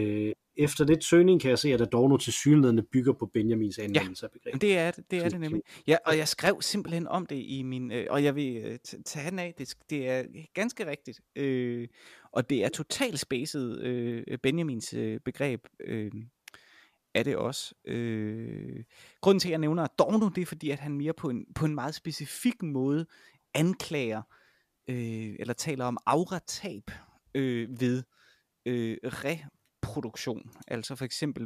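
A worn or dirty contact in the signal path briefly makes and breaks, producing loose connector crackle in this speech recording from 6.41 to 6.47 s: the signal is chopped intermittently, giving a short, irregular burst of scratchy crackle lasting about 60 ms.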